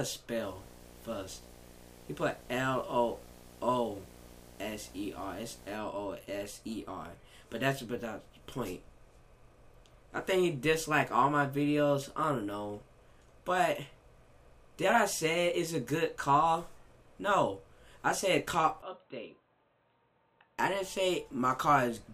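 A screen or video cable was coupling into the audio path, producing video or display buzz from 0.43 to 5.75 s: a 60 Hz field-rate buzz with hash riding above it, sitting roughly 25 dB below the main signal.

From 18.82 to 20.59 s the recording likely switched its input to a poorer device. With no gap at the changeover, the sound abruptly turns dull and boxy, with nothing above 4.1 kHz, drops about 10 dB in level, and gains a new noise floor roughly 40 dB down.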